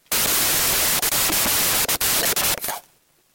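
A wrong sample width runs through the entire speech recording, from start to finish. The bytes are grouped three at a time where they were stored in pairs, which fits 16-bit audio being read as packed 24-bit. Most resulting values mix bytes from neighbouring samples, so a loud, harsh noise dominates, with the speech only faintly audible underneath. Fewer samples come out, so the sound plays 1.5 times too fast and is raised in pitch by the same ratio.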